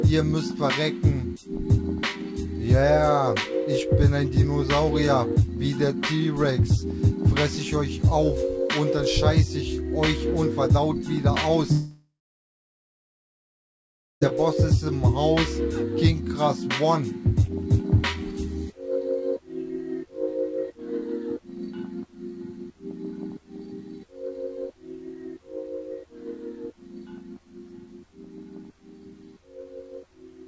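From 11.72 s to 14.23 s the sound breaks into a fading buzz that soon drops to about 2.1 s of silence before the audio resumes with that stretch gone, likely a long network dropout concealed by the receiver, on a G.722 call path with nothing above 8 kHz.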